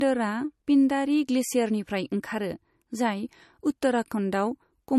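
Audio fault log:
Throughout: low-bitrate audio saved at a high bitrate. The speech has nothing above 12.6 kHz and keeps the smeared, swirly coding artefacts of a low-rate MP3. This likely comes from a roughly 42 kbit/s encode re-saved at 320 kbit/s, which adds size but cannot restore the discarded detail.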